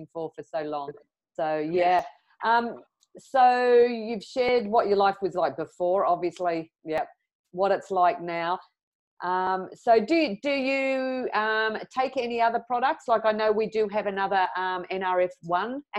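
Brief skips occur at 1.99, 4.49, 6.98, 9.47, 11.96 and 14.46 s, evenly spaced about 2.5 s apart. Each is likely audio missing between chunks. A few milliseconds vanish as one chunk ends and the next begins. The sides join abruptly, heard as a tiny jump.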